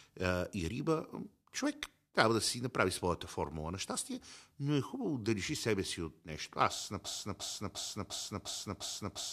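At 7.05 s a broken-record loop begins: one 0.35 s fragment of speech repeats identically, back to back, six times through the end, likely from a stalled stream resending its last fragment. Unlike an echo, copies never fade or overlap, and the following speech is lost.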